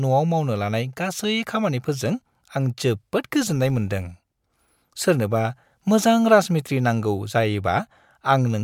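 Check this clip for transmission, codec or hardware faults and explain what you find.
One fault is present in the speech. From 3.42 to 4.44 s, after "खामानिफोरजों आं जोबोद", a filter restarted on every block resets each 20 ms block, causing a 50 Hz buzz that tracks the level, ending before "सोरनोबा मोजां राजमिस्थ्रि नांगौ".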